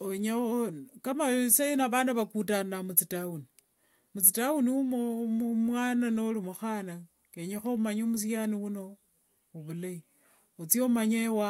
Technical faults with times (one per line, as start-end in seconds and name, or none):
none